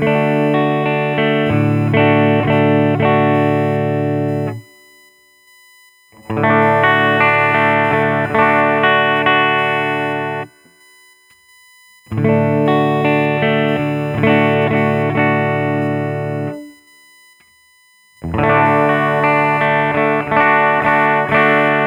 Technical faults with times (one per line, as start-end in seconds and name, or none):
0.00-21.86 USB whine